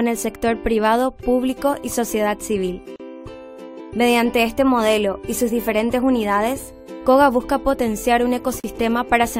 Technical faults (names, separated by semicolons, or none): gap at a join of encoded pieces